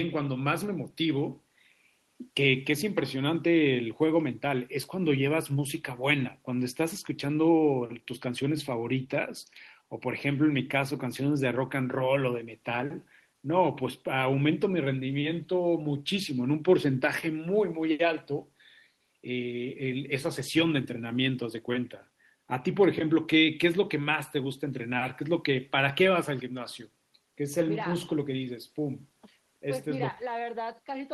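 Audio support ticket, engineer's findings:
Listened through the speech recording and nothing stood out that would warrant a finding.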